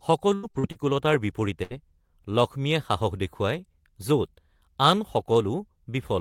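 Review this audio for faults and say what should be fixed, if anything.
From 0.35 to 0.78 s the speech turns choppy and robotic, with pieces of sound dropping out. This is repeated packet loss. Audio went missing or arrived too late four times in quick succession, the longest gap lasting 76 ms. Each time, the receiver patched the hole by extending the last bit of sound, so almost half of that stretch is filled-in material, and about 200 ms of the original never arrives.

At 1.63 to 1.73 s there is a brief held sound that fades away before the speech picks up further along. This is a burst of packet loss. Roughly 80 ms of audio was lost in one go. The receiver sustained the last sound and turned it down across the gap, and what was said in that interval is simply missing.

Both faults come from the network path, so they should be addressed there, with a steadier connection, a larger jitter buffer, and forward error correction or redundant packets so that lost audio can be rebuilt rather than guessed.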